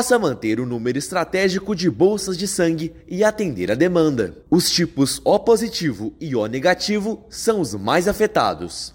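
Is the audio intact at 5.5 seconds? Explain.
Yes, the audio at 5.5 seconds is intact, with no audible fault at that moment.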